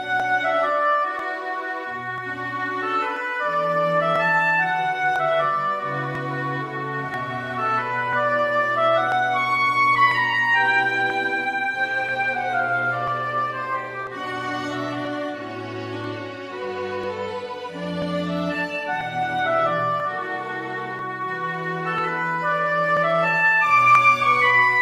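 Regular ticks every 0.99 s from 0.2 s to 23.95 s mark periodic USB or driver dropouts, each skipping about 10 ms of audio.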